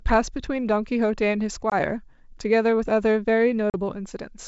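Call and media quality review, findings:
Packet loss on an ADPCM call, 1.70–1.75 s: 20 ms hard-edged silence, about one packet dropped. Decoder's adaptive predictor and step size drift from the sender's, so speech re-enters slightly distorted, settling within tens of ms.

Packet loss, 3.70–3.75 s: 40 ms gap, roughly two packets lost. Same re-entry mismatch, longer hole. Wideband G.722 band audible up to 7 kHz on either side.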